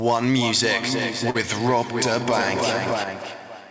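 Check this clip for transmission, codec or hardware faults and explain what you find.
One transmission fault stands out: a short stall from a late packet between 1.30 and 1.37 s. A packet missed its playout time and the jitter buffer ran dry, so the receiver stretched the preceding sound for 48 ms until it arrived. Nothing is lost, but that sound lingers audibly, and everything afterward plays 48 ms later. The call codec path is audible in the band limit, with nothing above 8 kHz, which fits G.722 at 64 kbps.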